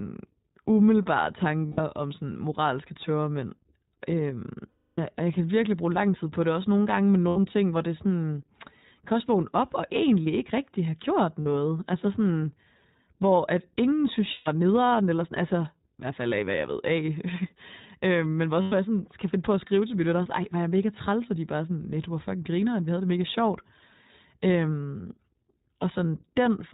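The iLBC codec is present throughout, audibly. Nothing above 4 kHz survives, and the speech sounds rough and synthetic; the codec runs in its 20 ms frame mode.

Lost iLBC frames occur at 1.66–1.80, 4.68–4.99, 7.28–7.38, 11.40–11.47, 14.32–14.48 and 18.62–18.73 s. Each gap becomes a held, slightly buzzy or breathy vowel from repeated pitch cycles. The longest is 300 ms, and the voice recovers at once.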